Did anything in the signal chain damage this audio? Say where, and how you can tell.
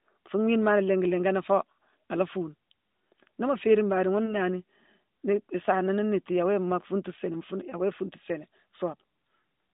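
Yes: lost AMR speech frames in the network. Brief dips at 4.26–4.35 s and 7.70–7.78 s. Each fits one 20 ms frame, refilled with repeated settings at falling gain.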